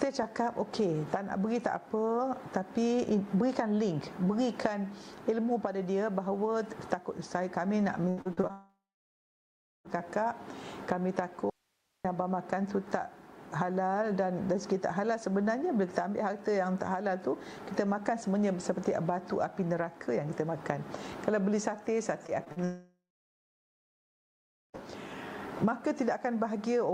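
From 8.09 to 8.51 s there's a burst of repeated packet loss with a robotic sound: five gaps, the longest about 77 ms, and nearly half that stretch is patched by stretching the last bit of audio. That's why it comes out choppy.

Right after, from 8.51 to 9.87 s, a long network dropout is the likely cause. About 1.34 s never plays. The receiver carries the last sound on briefly as a fading buzz or hiss, then roughly 1.07 s of it is just silence before the audio picks up again further along.

At 11.50 s the sound cuts abruptly to a faint residue, probably an audio dropout where the path after the break stayed live. For about 0.55 s only hiss remains, sitting around 45 dB below the normal level, and then the signal snaps back at 12.05 s.

Near 22.3 s there's a cluster of short concealed packet loss at 22.27 s, 22.44 s and 22.52–22.58 s, 20 to 40 ms each. Each hole gets filled from the preceding sound, so you hear quick smears or wobbles.

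Then from 22.64 to 24.76 s a second long dropout, again likely network-related, removes about 2.1 s. After a short fading continuation, around 1.75 s is silent.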